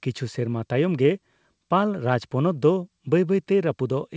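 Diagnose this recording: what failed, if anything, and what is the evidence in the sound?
Nothing failed here: the speech reaches the listener through a working call path whose band ends at 8 kHz, consistent with a G.722 wideband codec at 64 kbps, and no stage from capture to playback leaves a defect in the sound.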